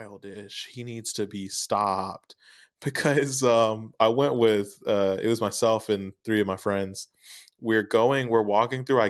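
Speech recording with automatic gain rising from 0.21 to 2.25 s: the gain control, judging the input too quiet, lifts the level by about 8 dB, so voice and background swell together.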